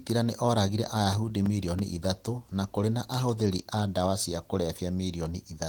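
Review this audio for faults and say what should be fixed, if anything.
CD scratch ticks run from 1.13 to 1.95 s: six short ticks at roughly seven per second, none longer than a few milliseconds. A scratch or blemish on the disc destroys more data than the player's error correction can rebuild. Once per revolution, the player fills the gap by interpolating or muting the damaged samples, which produces the regular ticking. To prevent it, clean or replace the disc and rip with a secure ripper that re-reads damaged sectors before encoding.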